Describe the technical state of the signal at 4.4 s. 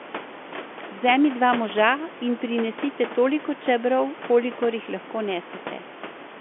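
At 4.4 s the signal is intact, with the room noise sitting about 13 dB below the speech and the telephone-band coding passing nothing above about 3.7 kHz, as expected for a G.711 line.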